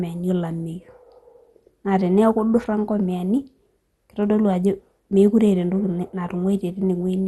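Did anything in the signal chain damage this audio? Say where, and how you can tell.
Yes. The damage comes from the codec stage and runs through the whole speech clip. Nothing is heard above about 12.1 kHz. What remains sounds dull, with a gurgling, granular edge that never lets up. This is likely MP2 compression. Layer II divides the spectrum into 32 sub-bands and shares out a fixed bit budget. Starved bands are shut off entirely and the rest are coarsely quantised. The plainly audible damage points to a low rate, roughly 64 kbps.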